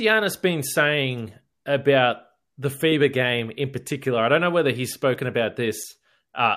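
Just after "whether he's spoken about", a corrupt frame decoded at 5.81 to 5.84 s. Flipped bits sent one frame's energy to wrong frequencies, causing a brief blip peaking around -20 dBFS.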